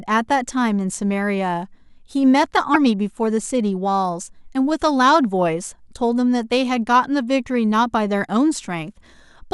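At 2.71 to 2.76 s the speech breaks up briefly. This is damaged data in a compressed stream. Part of the encoded audio is wrong there. The decoder misreads those frames, loses sync, and hunts for the next valid frame header.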